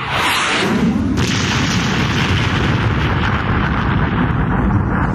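The gain keeps being pulled down under each loud sound throughout, a gain pumping swing of about 10 dB, likely from excessive gain feeding a fast limiter.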